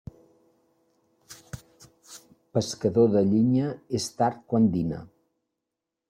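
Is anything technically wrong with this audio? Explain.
No, nothing technically wrong is audible in this speech recording.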